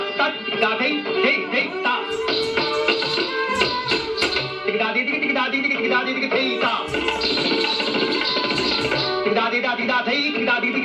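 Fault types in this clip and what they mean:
No technical fault can be heard anywhere in the audio, with the signal continuous and stable throughout.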